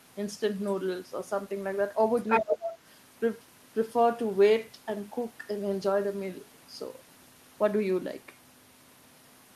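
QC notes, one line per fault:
2.16–2.41 s, other side's voice leaking through: a second voice surfaces for about a quarter of a second, roughly as loud as the main talker. The likely cause is far-end audio from a loudspeaker that the echo canceller failed to remove. Unlike a distant background talker, it sits at full microphone level.
2.41–2.79 s, speech suppressed in double talk: straight after the leak, the talker's level sinks for about 0.4 s, the deepest dip around 25 dB. This is the likely result of the echo canceller ducking everything while both sides overlapped. Unlike a packet dropout, the voice is turned down rather than gone.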